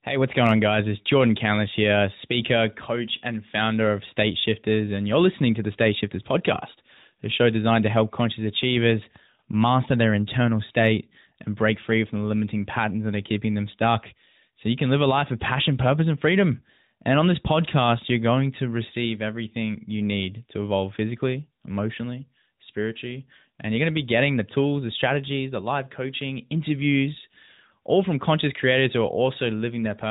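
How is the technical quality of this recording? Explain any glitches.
Nothing stood out as a glitch on listening, and the speech carries the narrow, telephone-like band of the AMR narrowband mobile codec, with nothing reaching above about 3.8 kHz.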